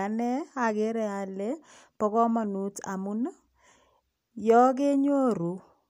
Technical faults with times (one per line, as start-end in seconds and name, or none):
none